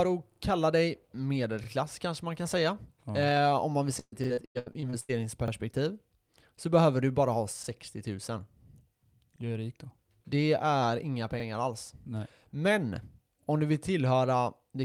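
Repeated buffers occur at 0.32 s, 1.64 s, 4.24 s, 5.48 s, 7.64 s, 9.36 s, 11.4 s and 13.44 s. Each time, fresh audio reached the playback device too late, so it replayed the 40 ms piece it already held. The first event repeats that piece twice, running to 0.40 s, and the rest repeat it once. Every repeat joins abruptly to the next, giving a brief stuttering blip in the speech rather than a dropout, with no audio actually skipped.

Repeated packet loss (robotic sound) runs from 3.99 s to 5.11 s, and the 4.24 s buffer repeat falls inside it. Packets kept going missing or arriving late, and each hole was covered by extending the sound that came before it. The pattern suggests about nine separate gaps, the longest 125 ms, with roughly half the stretch made up of this patching. The speech turns choppy, with pieces audibly missing.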